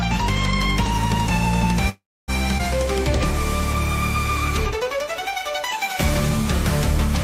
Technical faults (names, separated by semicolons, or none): call audio freeze; skip ahead; jitter buffer slow-down